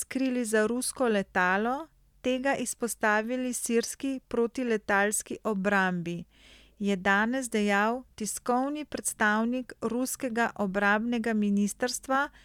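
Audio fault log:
No faults heard anywhere in the speech.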